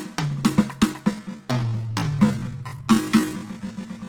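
From the start the music sounds grainy and rough, its tones turning noisy rather than clean, though the top end still reaches about 20 kHz. This is likely Opus compression in its music (CELT) mode, which fills starved bands with folded or noise content, fitting a low bitrate near 16 kbps.

From 1.09 s to the end, the pace abruptly drops to 0.54 times normal speed while the pitch holds steady, and the music drags. This is likely a time-stretched section, lengthened by repeating short pieces so the pitch stays put.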